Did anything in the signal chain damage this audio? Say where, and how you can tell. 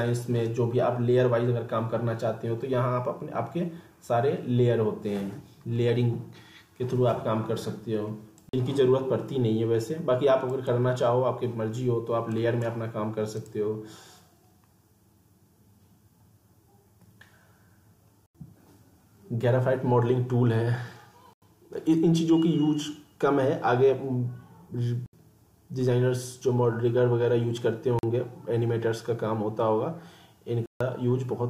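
Yes. Blocks of digital silence at 8.49, 18.26, 21.33, 25.06, 27.99 and 30.66 s, lasting 43 to 146 ms, point to buffer underruns in the driver or buffer stage; 43 and 85 ms lengths fit 2048- and 4096-sample blocks at 48 kHz. The waveform drops to a dead-flat line with hard edges, and the spectrogram shows blank vertical strips.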